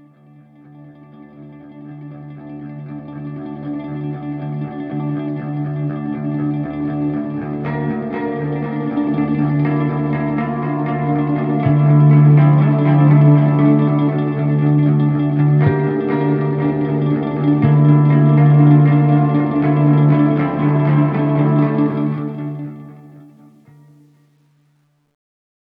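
From about 21.88 s to the end at 25.64 s, the fade-out picks up truncation distortion on the fade. The gain stage drops to around 11 bits without dither, so from 23.2 s the tail turns gritty and steppy.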